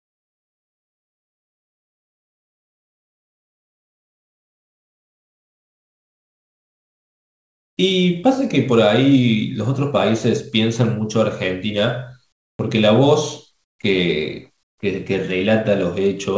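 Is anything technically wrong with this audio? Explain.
Yes. From 0 to 7.77 s, and again at 12.32 to 12.59 s, 13.64 to 13.79 s and 14.63 to 14.78 s, the background becomes a steady, featureless hiss. It is about 27, 21 and 20 dB quieter in the first, third and fourth gaps and about 1 dB louder in the second. This is likely comfort noise in place of the background: the sender stopped transmitting during pauses and the receiver synthesised filler. Unlike a gate, which leaves silence, the gaps are filled with noise.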